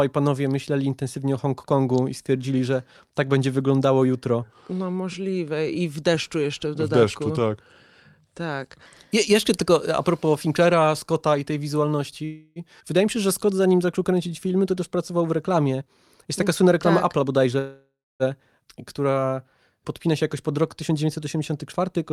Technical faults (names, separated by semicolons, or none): section at the wrong speed; call audio freeze; skip ahead; jitter buffer slow-down; jitter buffer speed-up